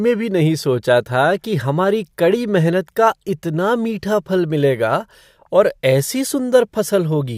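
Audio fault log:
3.28 s, overlap between stream segments: at a boundary between 6-second segments, overlapping time stamps led the player to trim about 7 ms of speech that wasn't actually duplicated, leaving a tiny skip. The waveform shows an abrupt step, and the spectrogram shows a thin vertical broadband streak.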